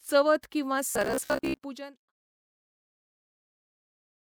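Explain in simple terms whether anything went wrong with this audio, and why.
From 0.91 to 1.6 s the speech turns into a rigid, metallic buzz, the robotic sound from repeated short buffers. The likely cause is audio arriving too slowly, so the software kept replaying a tiny slice, about 15 ms long, instead of the real sound, and most of that stretch is filled this way. That repetition imposes a fixed hum near 67 Hz. The fade-out starting around 1 s and ending at 2.13 s is a deliberate smooth fade.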